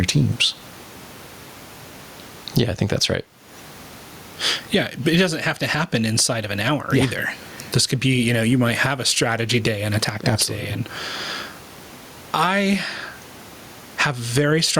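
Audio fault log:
throughout, gain pumping: the gain swings by around 20 dB under loud stretches of speech, squashing loud and soft parts together. Unlike a noise gate, it rides the gain down on loud sounds rather than muting the gaps, likely from far too much microphone gain driving a fast limiter.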